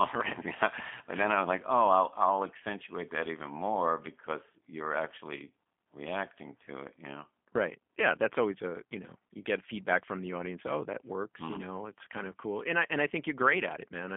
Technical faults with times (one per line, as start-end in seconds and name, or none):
0.00-14.17 G.729 codec